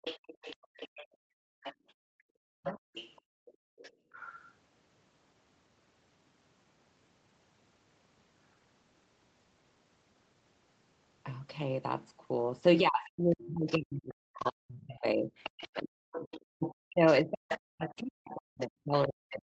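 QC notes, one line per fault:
0.02–4.52 s and 13.06–19.07 s, other side's voice leaking through: a second, fainter voice sits under the talker, roughly 20 dB down at first and roughly 15 dB down later. This is likely loudspeaker playback reaching the microphone that the echo canceller failed to fully subtract.
0.61–2.25 s and 3.21–4.12 s, background gated by the echo canceller: the room sound drops out for about 1 s in the first stretch and about 0.7 s in the second, dipping by about 38 dB and about 37 dB. The canceller clamped the microphone while the far end played.
2.53–2.92 s and 12.82 s to the end, speech suppressed in double talk: the talker's voice dips by roughly 40 dB, for about 0.3 s early on and again in the final stretch. This is likely the canceller mistaking overlapping talk for echo and attenuating both voices together.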